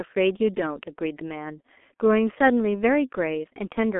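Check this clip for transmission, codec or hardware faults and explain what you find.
One fault runs through the whole clip: the G.723.1 codec. The speech sounds muffled and hoarse from start to finish, with consonants smeared and nothing audible above about 3.8 kHz, inside a telephone band of roughly 250 Hz to 3.4 kHz. The heavy damage points to a bitrate near 6.3 kbit/s. At that rate the codec rebuilds the voice from a coarse model updated only every 30 ms frame, so fast consonant detail blurs and the tone turns rough.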